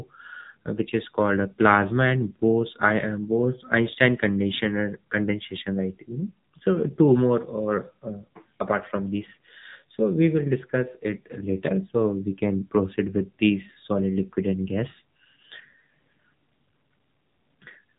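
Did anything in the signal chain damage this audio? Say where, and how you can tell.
Yes. Codec stage: AMR narrowband mobile codec throughout. Nothing above 4 kHz survives, and the speech sounds buzzy and synthetic, which fits a low AMR-NB mode around 7.4 kbps.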